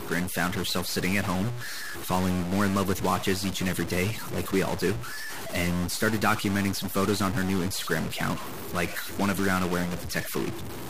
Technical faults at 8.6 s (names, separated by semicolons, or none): stuck bit